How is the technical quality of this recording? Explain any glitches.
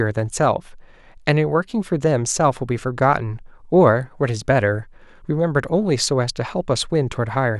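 No technical faults or glitches can be heard anywhere.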